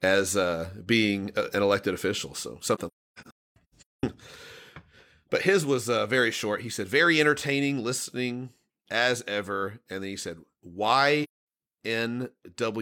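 Right after "an elected official so", from 2.75 to 4.03 s, the speech keeps dropping out in soft-edged gaps. That's AAC frame loss with muting: blocks of audio went missing and the decoder zeroed them, so the overlapping windows fade each hole in and out. About 0.94 s vanishes across that 1.28 s stretch, the longest gap roughly a third of a second. There's one more solid hole from 11.23 to 11.41 s.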